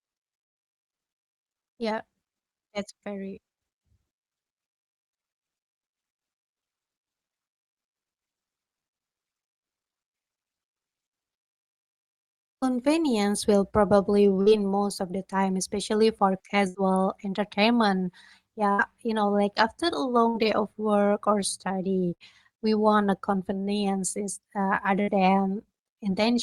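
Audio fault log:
14.41–14.49, 16.68–16.77, 18.72–18.81, 20.28–20.37, 22.14–22.23 and 25.02–25.10 s: burst of packet loss. Each gap lasts about 80 to 90 ms. The receiver fills it by stretching the last sound and fading it down, so a brief buzz or hiss replaces the speech. About 60 ms of speech is then skipped. At 22.14 s the dropout falls between "of work or study" and "we want a convenience".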